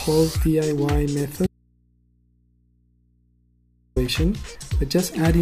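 At 1.47 s the sound cuts out abruptly and stays gone until 3.96 s, an audio dropout to a faint residue lasting about 2.5 s. The gap is not silent: a low mains hum sits there, roughly 40 dB below the normal level, which points to the wanted feed likely breaking while the input after it stayed open. Unlike a pause or a fade, the cut and the return are sudden and land mid-flow.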